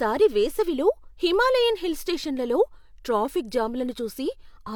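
No technical faults occur at any point in the recording.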